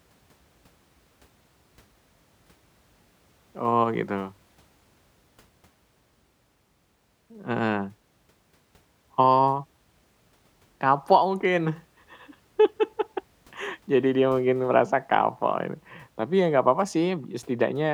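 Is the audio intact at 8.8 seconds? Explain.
Yes, the speech at 8.8 seconds plays through cleanly, with no dropout, click, distortion or other technical fault at that moment.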